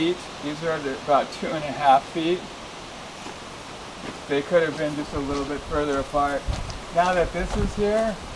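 No technical faults can be heard anywhere in the recording. Nothing in the audio breaks, drops out or distorts at any point.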